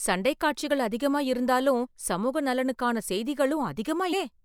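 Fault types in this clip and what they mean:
Compressed frames skipped: at 4.12 s the speech leaps ahead about a fifth of a second, because roughly ten whole compressed frames went unplayed.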